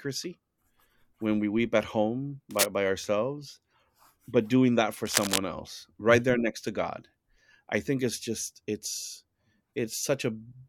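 Cable scratch noise hits after "we weep at home" (2.51–2.67 s) and after "but doing that for" (5.05–5.38 s): crackly rustling about as loud as the speech, likely from a worn connector shifting.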